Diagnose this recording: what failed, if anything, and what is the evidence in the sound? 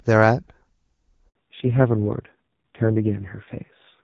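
A handover gap at the network stage: the call was passed from one network to another and no speech frames arrived during the switch. At 1.29 s the speech decays within a few tens of milliseconds and the audio goes silent for 60 ms, until the new link starts carrying frames at 1.35 s. Whatever was being said in that window is simply missing.

A fallback to narrowband at the codec stage follows immediately. Before 1.29 s the wideband AMR-WB (HD Voice) path sounds clean and full. From 1.35 s to the end, the call is re-negotiated onto a narrowband codec, so nothing above 4 kHz is present. The speech turns dull and muffled and acquires a rough, buzzy grain, which fits a low-rate AMR narrowband mode such as 5.9 kbit/s.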